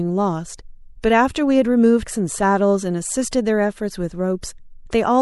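Throughout, the speech sounds watery and swirly with dulled treble, likely MP3 compression at a rate that fits a 64 kbps encode; unlike one-off glitches, this artefact never lets up. At 2.03 s, damaged data in the compressed stream makes the decoder lose frame sync, producing a brief glitch, isolated rather than continuous.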